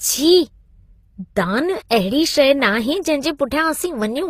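Throughout the speech, the artefacts of two different codecs sit on top of each other. This is likely transcoding between lossy codecs, and it fits a low-bitrate Opus pass followed by HE-AAC. A spectrogram shows a hard ceiling at 14.9 kHz and blotchy upper bands.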